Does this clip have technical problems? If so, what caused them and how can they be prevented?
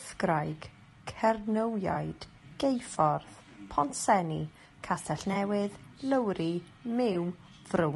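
Yes. Throughout, the speech sounds rough and grainy, with noise filling the gaps between harmonics and a thin, synthetic top band. This is likely low-delay AAC compression (AAC-ELD) at a low bitrate, around 32 kbps, where short frames resolve pitch poorly. Raising the bitrate or using a longer-frame codec would prevent it.

AAC frame loss with concealment appears at 1.93–1.96 s, 5.33–5.36 s and 7.13–7.16 s as brief smeared, noisy patches. Each is consistent with one lost frame of about 20 ms that the decoder rebuilt from the previous spectrum. Forward error correction or a larger jitter buffer would prevent it.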